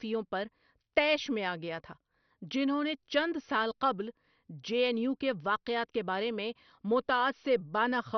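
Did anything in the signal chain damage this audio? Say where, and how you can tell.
Yes, at the codec stage, throughout the speech: nothing reaches above 6.1 kHz, and the remaining bands sound gurgly and granular, flickering in and out. This is likely heavy MP2 compression, which fits a low bitrate near 48 kbps, switching off upper sub-bands and coarsely quantising the rest.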